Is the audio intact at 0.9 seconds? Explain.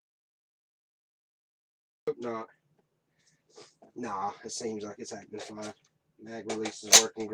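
No. An audio dropout to silence, likely from lost input with silence recorded, runs from the start to 2.08 s: total silence, no room tone.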